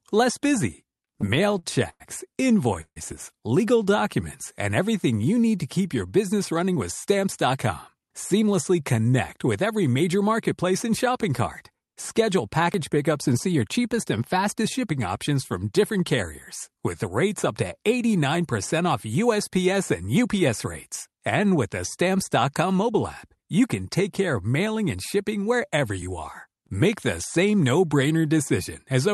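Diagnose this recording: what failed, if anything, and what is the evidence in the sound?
Repeated stalls (stutter) occur at the network and jitter-buffer stage between 0.91 and 2.98 s, just after "less busy". The speech halts ten times in that span, with the receiver stretching the last sound to bridge each gap. The longest hold is 150 ms, and about 388 ms is filled in total, roughly a fifth of the span. Packets arrived later than playback consumed them, so the buffer repeatedly ran dry. Nothing is lost, but delivery drags and stutters.

Jitter buffer speed-up appears four times, again at the jitter-buffer stage. From 6.33 to 8.54 s, between "need to keep your" and "connect with every major", the speech runs at 107% speed, about 150 ms shorter. From 13.11 to 13.46 s, before "your cheapest and fastest", it runs at 109%. From 20.01 to 20.67 s it runs at 109%, and from 24.95 to 27.61 s at 105%. 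The buffer held excess audio and trimmed pitch-period slices to cut the delay, so the speech sounds hurried at unchanged pitch.

A dropped buffer (overrun) shows at 12.74 s as a small jump forward in the sound with no silence, consistent with a piece of about 20 ms going missing. The likely cause is at the driver or buffer stage: the capture side did not collect its samples before the hardware overwrote them, and the audio on either side of the loss was spliced directly together.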